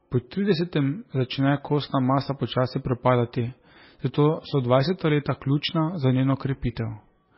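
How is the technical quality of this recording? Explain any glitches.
The technical quality is poor. Heavy MP3 compression damage runs through the whole recording. The speech has nothing above 5.6 kHz, so it sounds dull. S sounds come out metallic and chirpy. The sound has a watery, swirling texture. Consonant onsets smear. The likely cause is an MP3 encoder starved of bits, which fits a very low bitrate near 18 kbps. With so few bits, it cuts the treble at a fixed point. Weak frequency components then flicker in and out between frames, producing the swirl.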